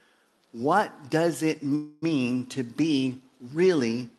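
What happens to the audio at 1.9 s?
At 1.9 s the sound stalls in a call audio freeze from 1.75 to 2.04 s. For about 0.27 s the last sound is stretched into a fading buzz or hiss. The likely cause is packets arriving late and the jitter buffer running dry. Playback then resumes where it stopped, so nothing is lost, only delayed.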